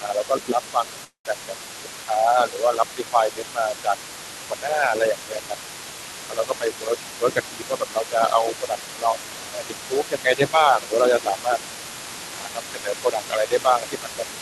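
An echo canceller, likely unable to separate the talker from loudspeaker echo during double talk, produced speech suppressed in double talk, dipping the speech by about 15 dB from 0.0 to 1.56 s. It did the same by about 10 dB at 1.74–3.97 s, 4.46–5.56 s, 6.25–6.97 s, 7.15–11.6 s and 12.31–14.23 s. Throughout the clip, residual echo likely left the other side's voice leaking through, faint at about 20 dB below the speech. At 1.04–1.26 s, a long network dropout, likely from lost packets, removed about 210 ms of audio; a fading fill covers the gap and decays to near silence before the sound resumes.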